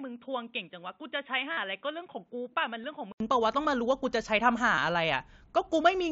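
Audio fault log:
0.00–3.20 input switched to a poorer device: first stretch is dull, quieter, nothing above 3.8 kHz, faint added hiss; likely a cheaper mic, clearing after an 80 ms gap.
1.53–1.57, 2.83, 4.76 concealed Bluetooth headset packet loss: the receiver papered over dropped headset packets by repeating recent waveform; the 45 ms run buzzes then warbles, the single one at 2.83 barely shows.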